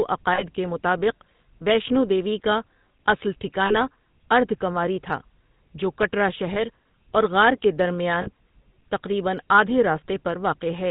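Throughout, the speech has a buzzy, gravelly roughness and nothing above 4 kHz. This is the GSM full-rate codec, whose sound fits a 13 kbps stream, modelling the voice with sparse regular pulses. At 0.34–0.43 s just before "کے مطابق", 3.66–3.75 s right after "دیوی کا اصل", 6.54–6.62 s, and 8.22–8.29 s just before "تقریباً آدھے", the sound freezes into a brief metallic ring. These are lost GSM frames: the decoder repeats the last good frame for about 40 ms, or about 20 ms at 6.54 s.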